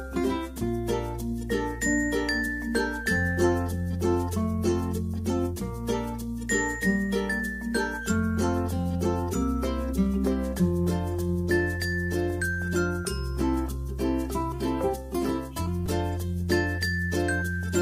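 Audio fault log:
15.86 s, repeated buffer: New audio did not reach the output in time, so the last block played again twice. The same tiny piece therefore sounds three times in a row, with a hard join at each restart. Each repeat lasts about 5 ms, which fits a 5 ms buffer. At that size the repeats run together into a brief click or buzz rather than a stutter. Almost no audio goes missing.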